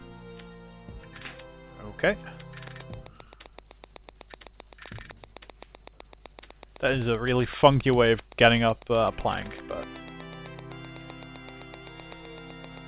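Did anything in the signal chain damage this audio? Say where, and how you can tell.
Yes: a train of clicks runs from 2.68 s to the end, a regular tick about 7.8 times a second, a few dB above the audio, likely interference pulses on the analogue wiring.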